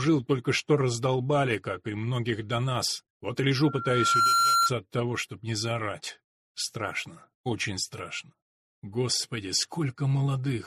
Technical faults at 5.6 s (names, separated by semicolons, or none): none